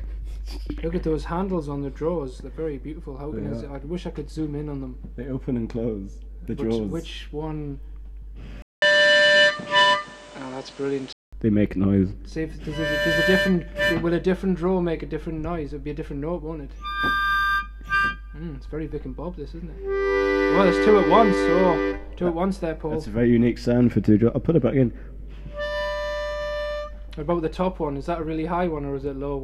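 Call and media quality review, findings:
Input switched to a poorer device, 8.62–11.33 s: 200 ms dropout at switch, then band capped at 10 kHz, duller tone, new noise floor, small level shift. Likely a capture-device or headset-profile change mid-call, narrower-band path until reversion.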